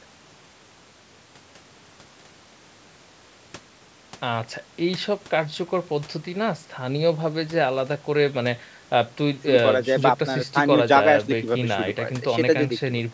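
Nothing stood out on listening: the speech has the ordinary sound of call microphone processing, with its lowest bass trimmed and nothing above 8 kHz, and no technical faults were heard.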